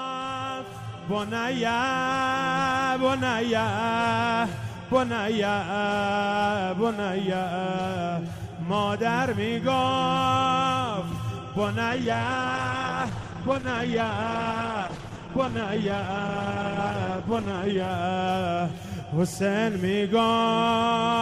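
The adaptive stream dropped to a lower bitrate from 11.9 s to 17.9 s, likely because the connection slowed, and then recovered. The switch is abrupt in both directions and leaves no gap. For those six seconds the top end is cut off above 12 kHz, so the audio turns dull, and coding artefacts become coarser. That fits a move from roughly 64 kbit/s Opus down to about 12 kbit/s.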